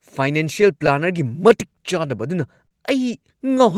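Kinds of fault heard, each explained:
Clock drift between sender and receiver: the sender runs about 3% slow, so small repeats recur unevenly across the whole clip, not in one spot.
Scattered short gaps: between 0.61 and 1.52 s, about four tiny holes, none longer than roughly 15 ms, are patched by continuing sound, leaving quick ticks rather than one held stretch.
Short stall from a late packet: from 2.67 to 2.74 s the last sound is held for 40 ms until the delayed packet arrives, a single drawn-out sound with nothing lost.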